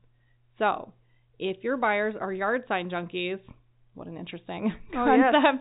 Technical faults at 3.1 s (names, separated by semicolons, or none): none